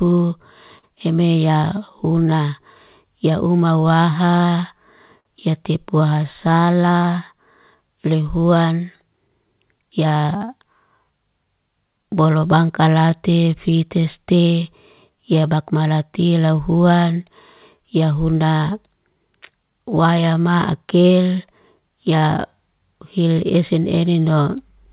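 Speech that drags slightly and unevenly from start to finish, with small hiccups scattered through it rather than any steady rhythm, is the sign of clock drift between sender and receiver. The sender's audio clock runs roughly 4 percent slow, so the receiver's jitter buffer keeps draining and has to be topped up. Those repeated timing corrections run from 0.05 s to 24.91 s, playing the speech at about 97 percent speed and padding in something like 0.7 s in total through many small, irregularly spaced repeats, all stretching rather than cutting. Twice a sound is briefly held too long with a slight buzz or dip, from 0.78 to 0.85 s and from 5.20 to 5.27 s. Each is a short stall from a late packet. The buffer ran empty, and the receiver stretched the last sound for 44 ms and then 52 ms until audio arrived, losing nothing. The band-limited sound, with nothing above 4 kHz, fits a narrowband G.711 call path.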